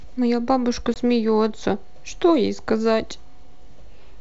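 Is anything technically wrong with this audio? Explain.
Yes. At 0.94 to 0.97 s the speech cuts into a hard-edged silent hole about 20 ms long, then returns unsteady for some tens of milliseconds. This is packet loss on an ADPCM call. What sounds like a single lost packet was replaced by silence, so the receiving decoder's adaptive predictor and step size drifted away from the sender's and had to catch up again. This G.722 call at 64 kbit/s carries wideband speech.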